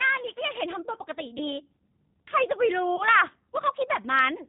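Throughout, the speech sounds band-limited, slightly rough and synthetic: a G.729 codec at 8 kbit/s rebuilds it from a vocal tract filter and sparse pulses, passing nothing above 4 kHz. At 1.38 to 1.54 s and again at 2.96 to 3.03 s, the sound smears into a brief, fading stretch before recovering weakly. This is VoIP packet loss concealed by the speech codec, and each gap fits a single lost 20 ms packet that the decoder extrapolated from its last pitch and filter.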